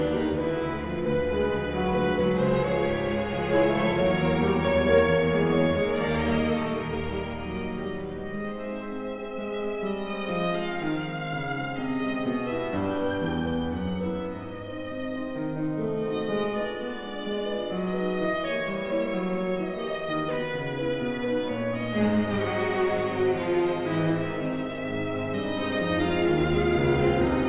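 There are no technical faults to describe at any point in this audio.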